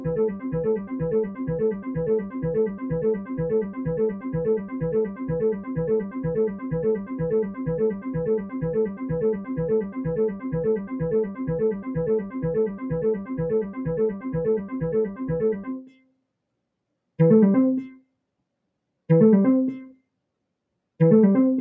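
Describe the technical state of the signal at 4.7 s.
At 4.7 s the audio is under a speech-tuned noise suppressor left running on non-speech material. It treats sustained content as noise, so level swings by roughly 15 dB and the waveform envelope pumps. This moment falls inside a stretch from 0.00 to 16.19 s where the suppressor cut the sound itself, dropping it by up to about 12 dB. Held portions and decays sink while onsets survive, which shows on a spectrogram as fading, patchy energy after each attack. The call microphone path limits content to below 8 kHz, which is visible as an empty band above that line.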